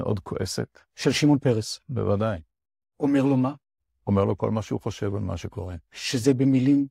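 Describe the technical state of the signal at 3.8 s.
At 3.8 s the speech signal is intact, with no audible fault at that moment.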